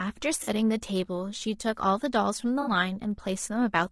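A speech clip with rough, grainy compression throughout: noise fills the gaps between harmonics and the top band sounds thin and synthetic. On a spectrogram the harmonic lines look blurred with speckled energy between them. This is likely low-delay AAC compression (AAC-ELD), with damage that fits a bitrate around 32 kbps. There are also two dropouts from AAC frame loss with concealment. At 0.43 to 0.49 s a 40 ms patch goes smeared and noisy, which points to two lost frames. At 2.61 to 2.71 s a 60 ms patch, consistent with three lost frames, sounds phasey. On a spectrogram both show as smeared, noise-like blocks where the harmonic structure breaks.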